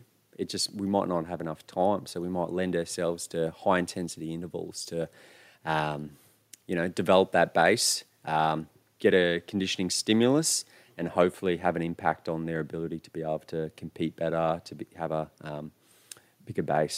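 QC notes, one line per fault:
Nothing here needs flagging; it's a speech clip with no faults to log.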